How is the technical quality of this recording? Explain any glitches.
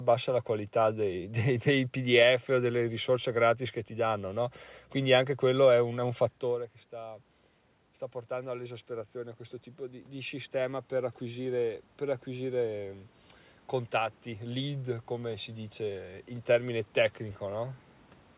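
The main glitch is automatic gain rising, heard twice. From 8.28 to 13.02 s the gain climbs about 7 dB, then from 13.72 to 16.81 s by about another 4 dB. Around 6.5 s the talker moves away and the level at the microphone falls by about 14 dB. The gain control slowly compensates, so voice and room noise swell together. On the waveform the envelope widens gradually. On a spectrogram the background floor brightens, ending at 4 kHz, where the call path's band limit points to G.711-style coding.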